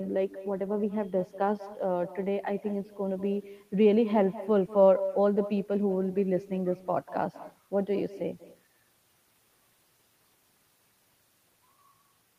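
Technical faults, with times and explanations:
Throughout, echo with no canceller: the far end's loudspeaker feeds its mic, so the speech returns about a fifth of a second later, about 16 dB down and thinner.
7.22 to 8.96 s, block size mismatch (truncated): block tails get chopped off, giving a 43.1 Hz buzz that fits 1024-sample blocks, though playback speed stays normal here.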